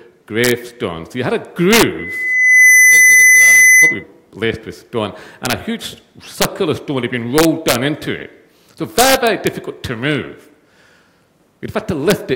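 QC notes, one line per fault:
0.44–0.51 s, 1.73–1.83 s, 5.45–5.53 s, 6.42–6.45 s, 7.38–7.75 s, 8.99–9.47 s and 12.10 s: integer overflow. Peaks exceed full scale by about 1 to 5 dB and wrap to the opposite sign instead of limiting, giving violent cracks far harsher than clipping.
1.98–4.03 s: loudspeaker feedback squeal. A 2 kHz tone swells over roughly 0.7 s to around 10 dB above the sound, as the speaker-to-microphone loop gain exceeds one there.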